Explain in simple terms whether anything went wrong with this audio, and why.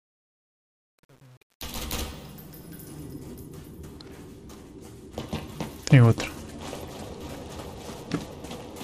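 Two things went wrong. From the start to about 3.04 s there's truncation distortion on a fade: too few bits (it sounds like about 10) turn the quiet fade gritty, worst until 2.48 s. From 4.92 s to 8.78 s, a Bluetooth SBC bit pool drop starves the codec of data, so the treble dulls and grainy noise creeps in.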